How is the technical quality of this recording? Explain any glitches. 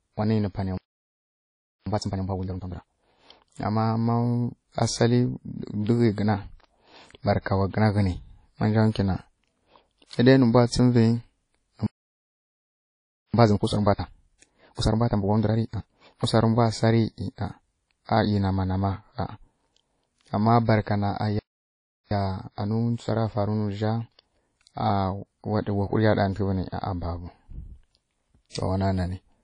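The speech is marred by constant codec damage and by three dropouts, each followed by a hurried stretch.

WMA compression runs throughout. The sound is plainly degraded, with a ringing, washy quality and hiss that rises and falls with the speech. Nothing is present above about 10.1 kHz, which fits a low bitrate near 32 kbps. Long transform blocks smear quantisation noise over tens of milliseconds and drop weak spectral detail.

Playback stalls occur at 0.78 to 1.86 s (1.09 s), 11.87 to 13.34 s (1.47 s) and 21.39 to 22.11 s (0.72 s). Each time the audio stops dead in mid-flow and goes silent. The likely cause is the player running short of data or its thread being blocked, leaving no output until it recovered.

Time-compressed catch-up follows each stall. It runs from 1.86 to 2.94 s at 2× speed, from 13.34 to 16.28 s at 1.5× (ending just before "ri mbwa sa ri"), and from 22.11 to 25.11 s at 1.1×. 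The player cut out small pieces and cross-faded the joins to clear its backlog, so the speech sounds rushed while keeping its normal pitch.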